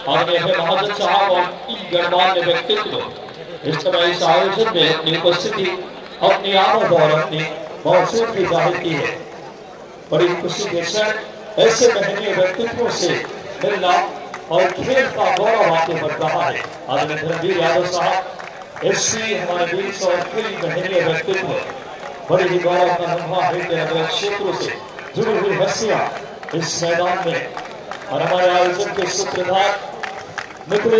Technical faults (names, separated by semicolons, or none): none